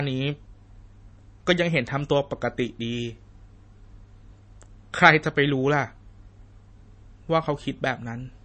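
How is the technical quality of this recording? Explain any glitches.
Quality's limited: the whole recording is dull and band-limited, with nothing above about 8.3 kHz. It's likely low-bitrate audio saved at a high bitrate; the leftover artefacts fit a low-rate MP3 re-encoded larger, which can't restore what's gone.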